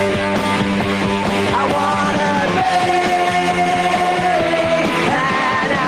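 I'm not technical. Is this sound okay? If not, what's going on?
Yes, this sound is okay. Nothing in it points to a technical problem.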